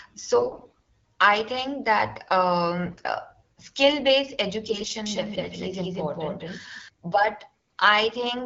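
AMR bit errors at 0.36 to 0.87 s, 2.89 to 3.07 s and 4.67 to 4.95 s: corrupted low-priority frame bits misplace excitation pulses, so the speech turns hoarse, scratchy and gargly, most heavily in the first burst. A doubled audio track from 5.06 to 6.88 s adds a second, equally loud copy about a fifth of a second behind, likely from an out-of-step edit, starting and stopping abruptly. AMR bit errors return at 7.55 to 7.77 s with the same rough, gargling texture.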